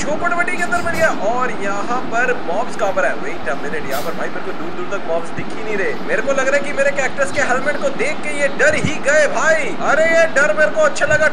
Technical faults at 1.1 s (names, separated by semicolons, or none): DC offset